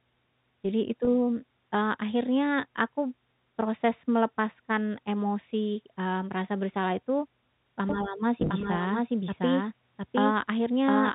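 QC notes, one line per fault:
1.05–1.07 s and 8.40–8.50 s: packet loss with pitch repetition. About 20 ms drops out at 1.05 s. Then 60 ms is lost in gaps up to 20 ms long, scattered over 100 ms. The receiver repeats the last pitch period to fill each gap. The result is a brief, slightly held, buzzy tone rather than silence.
7.89 s to end: doubled audio track. A second full-band copy enters abruptly and runs to the end. It trails by roughly 0.7 s at about equal level, with no decay or room colour. It is likely a second capture through a slower path, or two copies left out of step in an edit.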